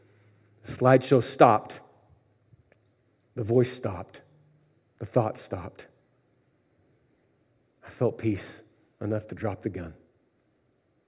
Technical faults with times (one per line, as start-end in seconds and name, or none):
none